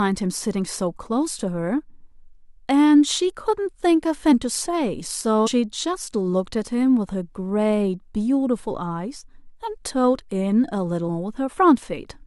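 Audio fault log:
4.32 s, 5.46–5.48 s and 11.08 s: compressed frames skipped. At each point the speech jumps forward, losing roughly 200 ms at 4.32 s and roughly 150 ms at the other two, which fits runs of about ten and seven whole frames of 23.2 ms missing or rejected by the decoder.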